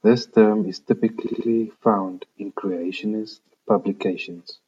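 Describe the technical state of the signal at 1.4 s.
At 1.4 s the speech is inside a stretch of repeated frames running from about 1.26 to 1.47 s, between "term is" and "found in creationist". A segment of about 70 ms, which fits a block of three compressed frames, plays three more times than it should, so a stutter is heard and the clip grows by 0.21 s. Unlike a dropout, nothing is missing or silent. The same sound is simply replayed before the speech continues.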